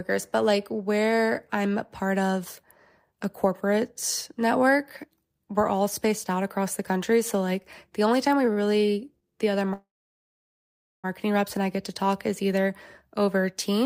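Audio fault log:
8.53–8.58 s, short stall from a late packet: the sound holds about 38 ms too long, stretched while the jitter buffer waited, then resumes at the same point with nothing lost. On a spectrogram, a brief horizontal smear of repeated harmonics; the waveform shows a repeated cycle.
9.73–11.06 s, call audio freeze: the speech stops and is replaced by a short fading buzz, then about 1.19 s of silence, roughly 1.3 s added overall, before it resumes where it stopped. The likely cause is packets held up in transit, emptying the jitter buffer. Expect a flat, empty waveform and a blank spectrogram band after a decaying smear.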